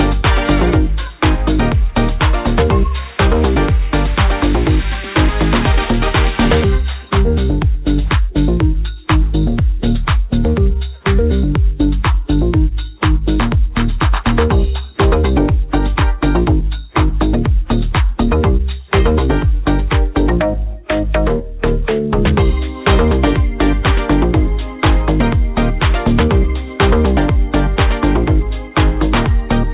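No technical faults can be heard in this audio. It came through a call path with nothing above 4 kHz, a narrowband telephone sound that fits a G.711 codec working as designed.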